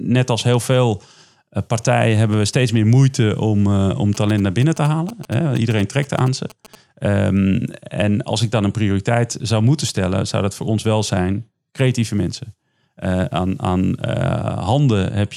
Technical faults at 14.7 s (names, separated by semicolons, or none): none